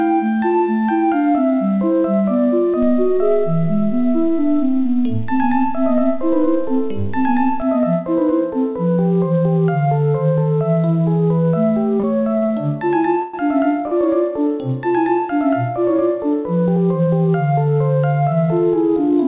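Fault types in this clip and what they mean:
DC step: From 2.83 s to 7.62 s the waveform's zero line sits shifted away from centre. A low thump marks the jump at 2.83 s, and the offset ends at 7.62 s. The sound between them carries on unchanged. Unlike a stall or freeze, nothing in the timing is held or stretched. Only the baseline moves, so the fault is heard just at its edges as low-frequency knocks.
short stall from a late packet: Four brief holds occur at 12.00 s (35 ms), 12.38 s (46 ms), 12.46 s (27 ms, with about 14 ms of extra stretching) and 13.88 s (40 ms). Each time, the receiver sustained the last fragment of sound while waiting for a tardy packet, then resumed exactly where it left off. Nothing is lost. The audio simply snags with a faint buzz or dip.
call audio freeze: At 13.22 s the sound hangs for about 113 ms. It is drawn out into a buzzy or hissy continuation that fades but never drops to silence, then it picks up where it stopped with nothing missing. 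The likely cause is packets held up in transit until the jitter buffer emptied. It is longer than the nearby short stalls. Throughout, the band stops at 4 kHz, which fits G.711 mu-law at 64 kbps.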